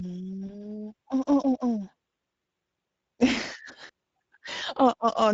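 Throughout, the speech sounds hoarse and grainy, with noisy highs: Speex codec damage, where a middle setting of about 17 kbps leaves too few bits for clean excitation. From 0.47 to 0.78 s, and again from 3.87 to 3.89 s, the speech smears into a fading buzz or coloured noise and stays weak afterward, the sign of VoIP packet loss concealed by the speech codec as the decoder extrapolates across a 20 ms gap.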